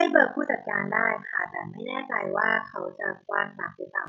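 Speech runs under a fast, rough flutter for its whole length. It is overlap-add ripple. The level dips and swells once per frame, around fifty times a second, with swings of about 60 dB. Frames were rejoined with an overlap that doesn't sum evenly, giving a rough tremolo.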